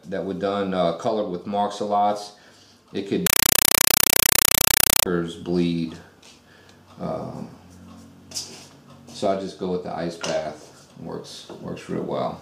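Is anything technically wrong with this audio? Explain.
Yes. From 3.27 s to 5.06 s the audio is replaced by a compressed stream played as audio. A Dolby Digital (AC-3) bitstream is passed through as if it were ordinary samples, so nothing decodes it. The result is loud, harsh chattering static repeating 31.25 times a second. On the waveform this shows as blocks of noise about 5.33 ms long separated by flat silent gaps. On a spectrogram it is a broadband wash striped by regular vertical bands.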